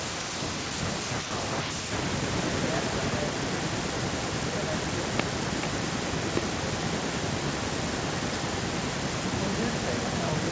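Speech recorded over a call, with an echo with no canceller running through the whole clip: the far end's loudspeaker feeds its microphone and nothing cancels it, so every phrase returns roughly 0.4 s later, about 10 dB down and thinner, having made the network round trip. Two loud pops sit on top of the speech, at 5.20–5.22 s and 6.37–6.39 s, each a single sharp transient well above the speech level while the talking carries on underneath; the likely cause is an electrical step such as a connector, switch or static discharge. The call microphone processing limits the band to nothing above 8 kHz.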